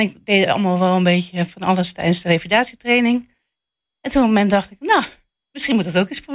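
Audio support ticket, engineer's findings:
Speech signal checked across its full duration with no audible faults found in the transmission, capture or playback path.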